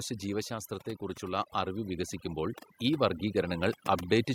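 Overdone noise removal runs through the whole clip. The noise reducer was pushed too hard, so bands near its noise estimate get switched off and quieter parts of the speech go with them. The background drops and breaks up into twinkly specks.

From 0.05 to 0.78 s there's automatic gain falling. The AGC decided the input was too hot, or its background noise too strong, and eased its gain down by about 4 dB, so the opening starts loud and then sinks, voice and background together.

Then from 1.19 to 3.63 s the opposite happens, automatic gain rising. Now the AGC judged things too quiet and slowly brought its gain up by about 8 dB over more than two seconds, so the speech and what's left of the background swell up in step.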